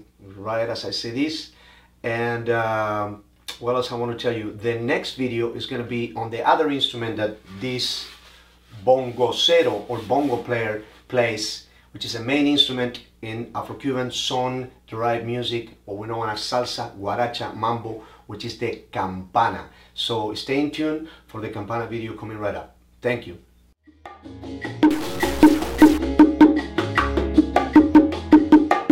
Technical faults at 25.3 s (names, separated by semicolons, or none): stuck bit